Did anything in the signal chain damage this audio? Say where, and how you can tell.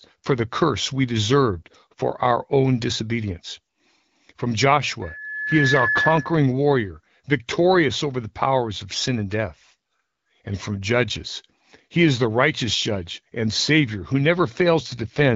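Yes. At the capture end, a loudspeaker feedback squeal runs from 5.02 to 6.50 s: a 1.7 kHz tone swells over roughly 0.7 s to sit about 5 dB above the speech as the mic-speaker loop exceeds unity gain.

At the network stage, there's an AMR rate drop from 14.87 to 15.35 s. The otherwise clean 12.65 kbit/s wideband speech goes rough and synthetic as the link forces the codec down to 6.6 kbit/s.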